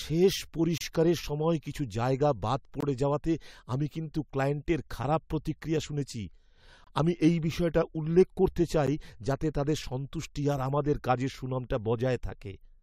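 Gaps between stream segments at 0.78, 2.81, 6.84 and 8.87 s: timestamp mismatches at roughly 2-second segment boundaries leave silent, hard-edged holes of about 12 to 30 ms, breaking the speech with no audio lost.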